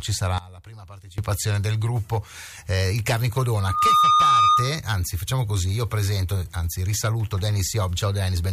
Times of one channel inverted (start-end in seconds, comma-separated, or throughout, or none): 0.38-1.18